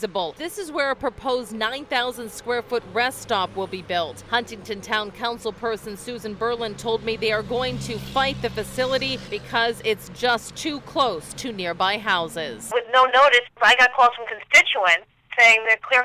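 No technical faults are audible.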